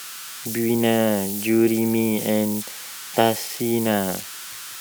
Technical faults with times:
0.00-4.80 converter idle tones

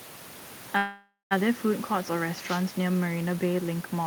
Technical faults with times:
0.77-1.33 call audio freeze
2.45-2.62 wireless microphone noise hit

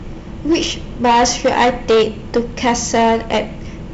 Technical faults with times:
0.00-3.94 hard clipping

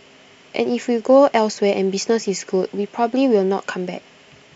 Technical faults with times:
none

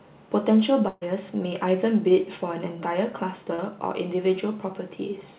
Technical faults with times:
0.88-1.03 burst of packet loss
3.55-3.60 short concealed packet loss

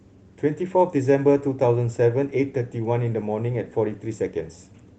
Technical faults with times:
none

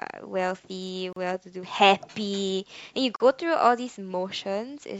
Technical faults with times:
1.13-1.16 gap at a join of encoded pieces
3.16-3.20 gap at a join of encoded pieces

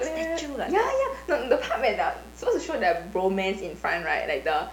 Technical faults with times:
0.00-4.72 mains buzz

